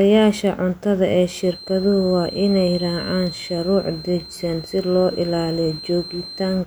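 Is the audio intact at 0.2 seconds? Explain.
Yes, the speech at 0.2 seconds plays through cleanly, with no dropout, click, distortion or other fault at that moment.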